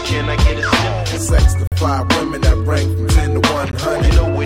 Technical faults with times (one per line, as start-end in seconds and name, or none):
1.67-1.72 gap between stream segments
3.72 gap between stream segments